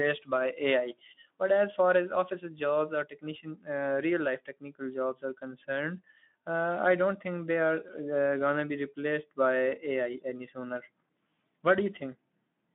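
No technical faults can be heard in this speech. The Speex codec, at about 15 kbps over a line band of roughly 200 Hz to 3.6 kHz, leaves only light coding damage, heard as a narrowed, telephone-like bandwidth.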